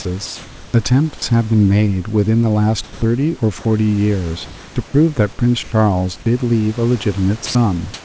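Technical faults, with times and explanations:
0.26–0.74 s, 4.46–4.76 s and 7.94 s to the end: comfort noise in place of the background. In these pauses the room's background, about 21 to 23 dB below the loud parts, gives way to a steady, featureless hiss, likely because discontinuous transmission stopped sending and the receiver synthesised noise. The level shifts by about 5 dB, 1 dB and 6 dB. On a spectrogram the textured background becomes a smooth, uniform band that stops at the 8 kHz ceiling of the G.722 path.
2.84–3.02 s, 4.88–4.94 s, 5.63–5.72 s and 7.46–7.55 s: sound dropped by the voice detector. Short stretches of speech vanish into steady noise for 180, 60, 90 and 90 ms, losing about 80, 40, 40 and 80 ms of actual speech. The likely cause is the sender's detector mistaking the sound for background and halting transmission. A spectrogram shows harmonics cut off abruptly, a flat noise patch, then speech resuming. 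The waveform shows an envelope that drops to a low, even floor.
6.24 s: onset clipped by the voice detector. About 20 ms at the start of a sound is missing, so it begins abruptly without its soft attack, likely because the detector was slow to register renewed activity and comfort noise filled that instant. On the waveform the envelope jumps almost vertically from the noise floor instead of ramping up. On a spectrogram the speech energy starts with a hard vertical edge.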